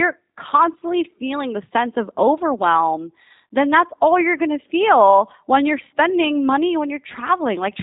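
From start to finish the speech carries G.729 codec damage, and it's plainly audible: nothing above about 3.8 kHz survives, and the voice is rebuilt from a filter plus a few pulses, so it sounds rough and slightly synthetic. That fits an 8 kbit/s G.729A link.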